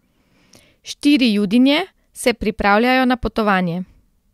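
Listening to the speech here, nothing stood out as a technical problem at any point.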